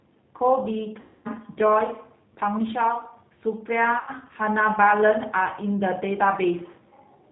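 Throughout, the speech carries the narrowband, slightly rough sound of the G.729 codec at 8 kbit/s. Nothing above 4 kHz survives, and each frame is rebuilt from a filter, a pitch predictor and sparse pulses. The result is a plainly audible grainy, synthetic texture, not the smooth dullness of simple low-pass filtering.

From 1.01 to 1.28 s and again from 3.99 to 4.10 s, VoIP packet loss concealed by the speech codec takes over. About 240 ms and 80 ms of audio are missing, and the decoder stretches the last pitch and filter into a fading buzzy tone or coloured noise instead of leaving a silent gap. The voice stays weak or distorted briefly after each event.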